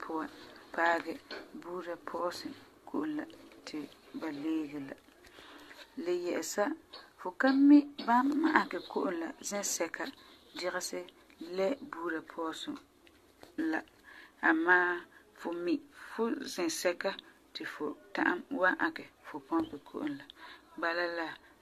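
Throughout the speech, generation loss gives a swirly, hollow sound with blurred attacks and nothing above 14 kHz, likely from about five successive AAC-LC encodes near 64 kbit/s.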